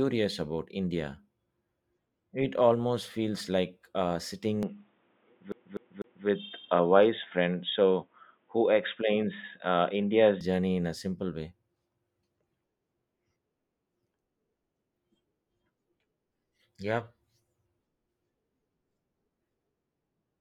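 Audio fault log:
4.63 to 10.41 s, input switched to a poorer device: right after "almost feels like uh" the sound turns dull and boxy, with nothing above 3.8 kHz, a level shift of about 5 dB and new background noise around 45 dB down, until "journey in a simple". The likely cause is a change to another microphone or a headset's call profile. The shift is instant, with no gap, and brings its own noise floor, unlike a plain filter.
5.52 to 6.27 s, CD stuck on one turn: a 0.25 s slice of audio plays three times in a row at an even rate. This is the strict, mechanical stutter of a disc skipping back one track. Because the slice length and spacing never vary, it is distinct from irregular network or buffer repeats.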